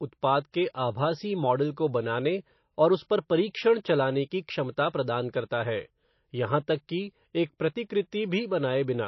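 Throughout the speech, the treble stops dead at 5.8 kHz and the sound has a watery, swirling texture. This is likely MP3 compression. A starved encoder drops the top band and gates weak frequency lines on and off, which fits a bitrate near 27 kbps.

Pre-echo appears at 0.52 s, just before "के आभासी मॉडल को", and again at 3.83 s, ahead of "चलाने की". A short hiss of 18 ms and then 15 ms leads each onset. The coding noise is spread across a whole block, so it spills into the quiet before the attack and softens it.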